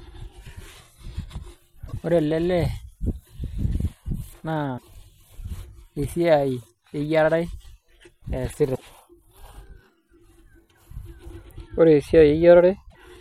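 Speech with damaged data in the compressed stream at 1.84–1.93, 4.74–4.84, 8.71–8.81 and 12.87–12.96 s: each brief fault is garbled frames.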